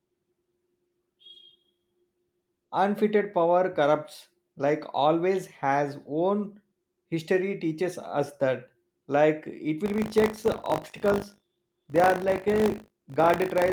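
A robotic 50 Hz buzz coats the speech from 9.84 s to the end at 13.72 s. This is buffer tearing: writer and hardware have slipped, so a small slice of each period, fitting a 20 ms cycle, replays audio from around 40 ms earlier, with hard joins.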